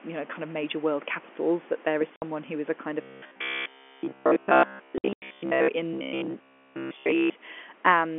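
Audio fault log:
2.16–2.22 s and 4.98–5.22 s: packet loss filled with silence. The first hole is 60 ms, which fits two 30 ms packets. The second loses 150 ms in gaps scattered over 240 ms, the longest 90 ms. Each hole starts and stops abruptly.
3.01–5.68 s and 5.93–7.34 s: robotic sound from repeated short buffers. The speech turns into a rigid, metallic buzz at about 67 Hz that still loosely tracks the words. Most of the real audio is missing. The likely cause is audio arriving too seldom, so a 15 ms chunk gets replayed.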